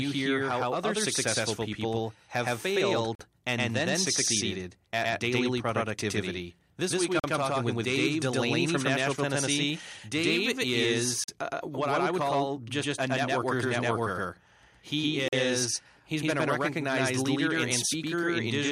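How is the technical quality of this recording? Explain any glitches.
The recording has two clear technical problems: the speech is doubled throughout, and short silent holes interrupt it at regular intervals.

A doubled audio track runs the whole clip. A second full-band copy trails the original by roughly a tenth of a second at about equal loudness, likely from a slower second capture path. It sounds like a dry, slapback stutter with no room decay. On a spectrogram every syllable appears twice, shifted right.

A gap between chunks occurs at 3.15, 7.2, 11.24 and 15.28 s. Each is a 44 ms hole of silence, about 4 s apart, likely left when each chunk starts late. The first falls between "successful people have failed" and "and then succeeded at". The next three come just before "talking with", just before "uh what I would", and at 15.28 s. On a waveform each is a flat, hard-edged notch, and on a spectrogram a blank vertical stripe.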